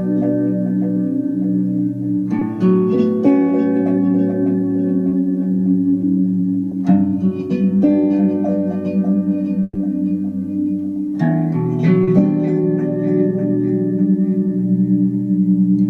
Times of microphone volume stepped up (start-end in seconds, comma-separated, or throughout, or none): none